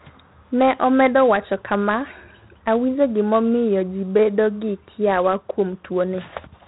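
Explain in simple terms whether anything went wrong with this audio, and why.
Yes, this speech has been squeezed through 4-bit ADPCM compression, and it lasts the whole recording. That format saves space by storing only a rough guess of how each moment differs from the last, so a gritty hiss rides along on every loud syllable and sharp starts come out crunchy. The damage here is heavy. Nothing survives above about 3.9 kHz either, which fits a low sample rate of around 8 kHz, so it all sounds dull and muffled.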